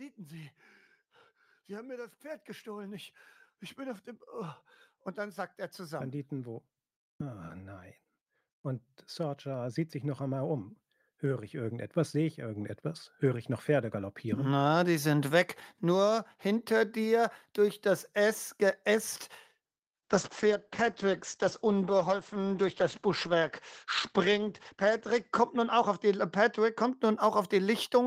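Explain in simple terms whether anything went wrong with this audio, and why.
Two problems can be heard. Automatic gain rising happens from 1.67 to 3.09 s, slightly, and again from 8.64 to 14.69 s, more strongly. Voice and background slowly swell louder together.

A call bitrate drop starts at 19.83 s and lasts until 27.35 s. The connection squeezed the sound into far less data, so it turns rough and muffled, losing its crisp top end.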